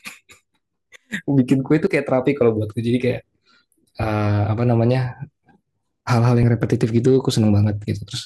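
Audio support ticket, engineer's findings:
Small forward jumps in the speech at 1.87, 6.43 and 7.64 s, no gap. Likely dropped buffer (overrun): roughly 20 ms, then 10 ms, of samples overwritten before capture read them.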